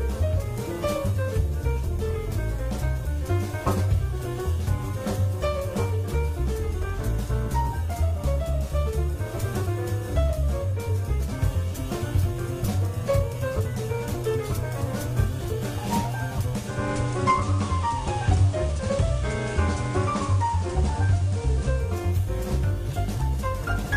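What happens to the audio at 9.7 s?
Nothing goes wrong at 9.7 s. The audio carries on intact through that moment with no audible fault.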